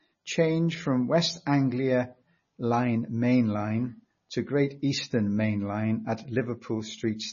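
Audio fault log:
throughout MP3 compression: the speech sounds watery and swirly, with chirpy s sounds and nothing above 6.9 kHz. This likely comes from heavy MP3 encoding, fitting a bitrate around 24 kbps, where starved bits cut the treble and make weak frequency lines flicker between frames.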